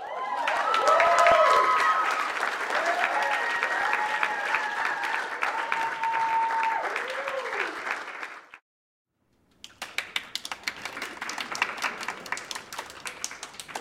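Periodic USB or driver dropouts run from 0.07 to 13.52 s, every 0.249 s; each stall skips about a millisecond of sound, heard as regular ticks.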